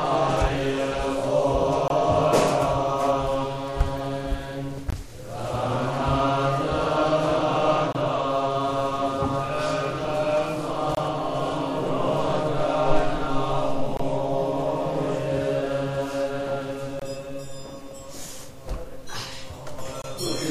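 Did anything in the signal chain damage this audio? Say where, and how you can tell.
Yes, there's a gap between chunks, from playback or storage of chunked audio. Hard-edged holes of about 23 ms land at 1.88, 4.90, 7.93, 10.95, 13.97, 16.99 and 20.02 s, one after every 3 s chunk. Each join gets silence padded in, which fits one 1024-sample frame at 44.1 kHz.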